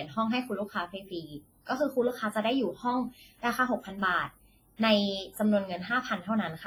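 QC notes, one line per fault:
Throughout, WMA-style compression: the speech has a ringing, washy smear, with quantisation noise spread tens of milliseconds around each sound so transients lose their edges, and a hiss that swells and fades with the level. Quieter detail has dropped out. The damage is heavy and fits a low bitrate of around 24 kbps, likely from a long-block WMA transform encoder zeroing weak spectral lines to save bits.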